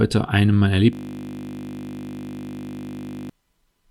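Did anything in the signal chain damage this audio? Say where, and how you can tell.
Yes. A system hang loop at the driver or buffer stage runs from 0.93 s to 3.30 s. The sound stops evolving and turns into a steady 50 Hz buzz, because one 20 ms slice repeats exactly, about 118 times. The host froze while the hardware kept replaying its ring buffer. On a waveform the 20 ms cycle repeats identically. A spectrogram shows a frozen comb of harmonics at 50 Hz spacing.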